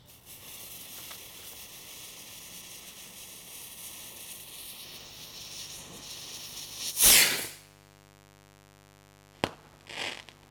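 A recording of everyday sounds. From 4.84 s to the end, a steady, raspy mains buzz sits roughly 25 dB below the sound. Its 50 Hz harmonics climb to several kHz, pointing to dimmer or rectifier switching spikes or a missing shield.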